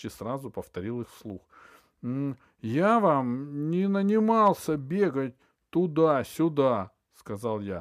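No technical faults can be heard anywhere in the speech recording. There is no event to place in time and nothing to describe.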